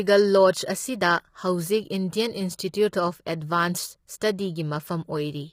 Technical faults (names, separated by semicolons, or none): low-delay AAC compression